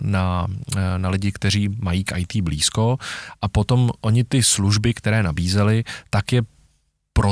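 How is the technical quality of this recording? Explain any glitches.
Nothing stood out on listening to this speech recording; there were no glitches to explain.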